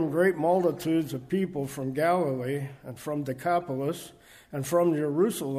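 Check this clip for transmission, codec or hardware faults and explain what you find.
Two brief glitches stand out, both from a corrupt frame decoded. At 0.77 s a faint, short burst cuts across the sound, and from 3.60 to 3.62 s a slightly stronger burst follows. Each lasts only about one codec frame, which suggests a single damaged frame each time. Flipped bits in the compressed data led the decoder to misread gains or codes and place energy at the wrong frequencies. Both bursts are quiet, the second somewhat louder.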